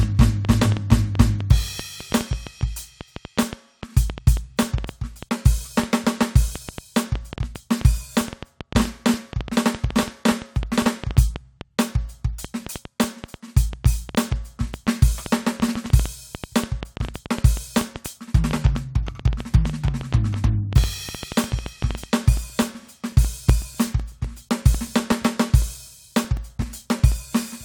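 From 0.03 s to 22.0 s, a sharp, uneven ticking runs over the music, about 6.3 clicks per second and some 150 in all, with peaks roughly 10 dB above the music so they stand out even in quiet moments. This is a train of clicks: near-identical pulses added on top of the signal at an irregular pace, likely from electrical interference from nearby equipment or a faulty connection or power supply.

From 22.37 s to 27.12 s the ticking changes to a steady pattern, a tick every 0.125 s (eight per second), about 40 in total, heard only while music is playing. These are periodic USB or driver dropouts. Something blocks the audio path at a fixed interval, and each time around 2 ms of music is lost and replaced with silence. Those brief evenly spaced gaps are what produce the regular ticking.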